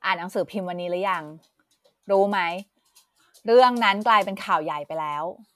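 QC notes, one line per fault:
No faults heard in this speech recording.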